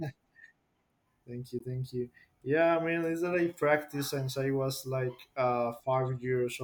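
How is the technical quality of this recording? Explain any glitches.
The speech has one glitch, a brief Bluetooth dropout from 1.59 to 1.62 s. The likely cause is an audio packet reaching the headphones too late and being discarded, a gap that fits a single lost frame of about 15 ms. The output cuts to silence, then the speech resumes further along, as though it had kept playing.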